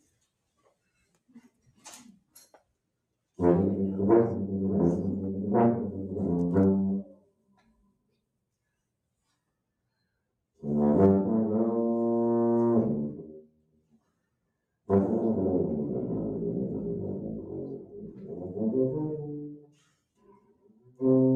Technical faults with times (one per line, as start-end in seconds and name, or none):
0.00-21.36 noise suppressor applied to music or sounds
1.01-1.85 sound cut by the noise suppressor
7.03-8.20 sound cut by the noise suppressor
13.38-14.18 sound cut by the noise suppressor
17.81-18.38 sound cut by the noise suppressor
19.48-21.01 sound cut by the noise suppressor